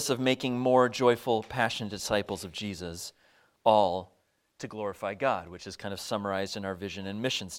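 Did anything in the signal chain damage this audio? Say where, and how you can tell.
No, nothing in this audio stood out on listening as a sign of damage anywhere in the signal chain.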